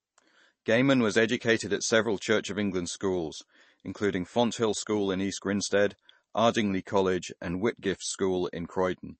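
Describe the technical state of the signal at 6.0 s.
At 6.0 s the speech carries MP3 compression throughout the clip, likely from a low bitrate near 32 kbps: treble stops sharply at 8.3 kHz, and dropped weak components leave watery, swirling artefacts.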